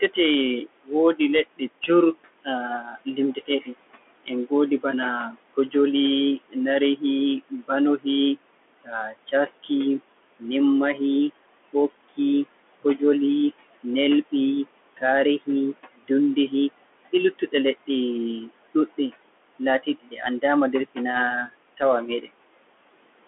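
Noise suppressor artifacts run through the whole recording: the room noise, sitting about 18 dB below the speech, is pulled down by about 20 dB in the gaps and swells back under each phrase as the gain tracks it frame by frame.

A Bluetooth CVSD headset codec is also present from start to finish, with plainly audible damage. The band is confined to roughly 250 Hz to 3.4 kHz, and nothing above 3.8 kHz gets through. Sibilants come out scratchy, loud bright sounds break up where the adaptive step cannot keep pace, and a granular hiss sits under the speech. The sound fits a 64 kbps one-bit stream.

Speech cut by the noise suppressor occurs repeatedly between 0.01 and 22.27 s, adding up to about three seconds in all. Soft consonants and word endings are pushed down with the background, by as much as about 21 dB at the deepest, and sound swallowed or faint.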